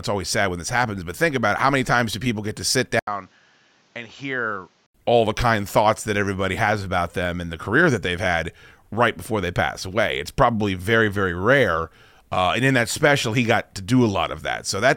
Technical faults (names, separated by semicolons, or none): input switched to a poorer device